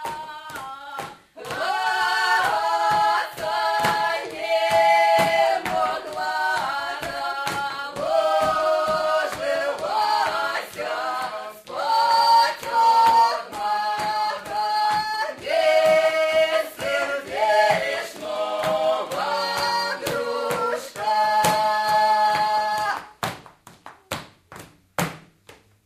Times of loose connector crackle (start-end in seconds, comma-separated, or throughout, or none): none